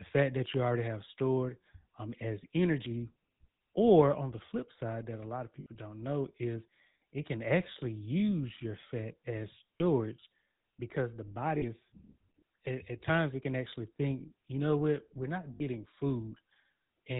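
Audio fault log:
throughout GSM full-rate codec. The speech has a buzzy, gravelly roughness that is plainly audible. The codec models the vocal tract and drives it with a regular pulse train. It keeps only every third excitation sample, so fine detail in the voice is lost. Nothing above 4 kHz gets through, which makes the sound narrow and dull. The damage points to the 13 kbps full-rate coder.
5.60–5.67 s, 9.78–9.81 s, 11.58–11.63 s, 15.54–15.63 s lost GSM frames. The speech briefly freezes into a rough, metallic ring. The gaps last 60, 20, 40 and 60 ms, which fits runs of one to three lost 20 ms frames. The decoder fills each gap by repeating the last good frame's settings. No gap is long enough to fade fully to silence.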